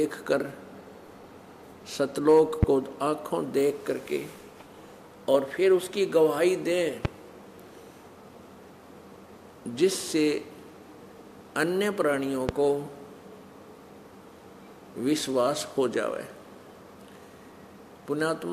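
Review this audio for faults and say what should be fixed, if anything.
Three loud pops, at 2.63–2.65 s, 7.05–7.08 s and 12.49–12.52 s, each peak around 20 dB above the sound, likely from a voltage pulse such as static, a switch or a driver glitch. Each shows as a lone tall spike on the waveform and a thin, full-height vertical stripe on a spectrogram.

To prevent them, ground the equipment properly, avoid plugging or switching anything while recording, and keep the audio drivers stable.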